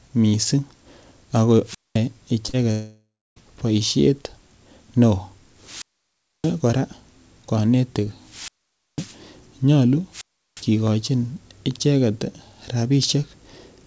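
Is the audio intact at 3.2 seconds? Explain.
No, 3.2 s falls inside a gap from 2.71 to 3.38 s, likely a long network dropout. The speech stops, the last sound is stretched into a fading buzz, then about 0.3 s of near-silence follows, and the lost stretch never comes back.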